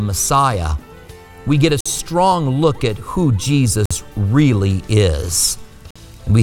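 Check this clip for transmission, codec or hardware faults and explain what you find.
Three short holes cut through the sound at 1.81, 3.86 and 5.91 seconds, each lasting 50 ms and spaced 2 s apart. This is a gap between chunks: the audio arrives in 2-second blocks, and silence is inserted at each join.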